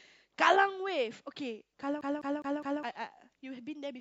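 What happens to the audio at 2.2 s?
At 2.2 s the speech is caught in a CD stuck on one turn fault, 2.01 to 2.83 s: a scratch throws the laser back, replaying one 0.21 s segment four times with brief mutes.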